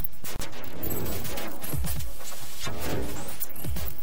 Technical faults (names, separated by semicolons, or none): gap at a join of encoded pieces